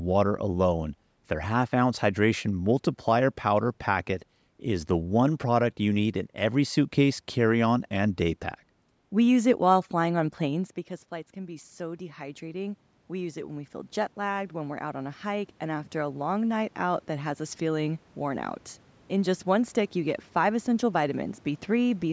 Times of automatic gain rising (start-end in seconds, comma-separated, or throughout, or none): 11.33-16.33